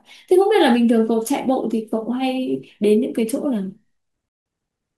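At 4.29 s the speech drops into silence, and it picks up again at 4.46 s. This is a rebuffering stall. The player used up its downloaded audio and waited for more. Playback resumes exactly where it stopped, so nothing is lost. About 170 ms of dead air is added.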